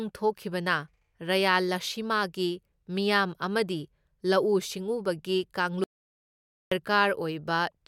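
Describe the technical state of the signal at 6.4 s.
At 6.4 s you're right in the middle of an audio dropout to silence, which runs from about 5.84 s to 6.72 s, so roughly 0.88 s of the speech is simply gone. The sound cuts out mid-flow and drops to silence, not even room tone, then picks back up. That points to the input itself vanishing, likely a disconnect, a failed link or a stray mute, while the recorder kept writing silence.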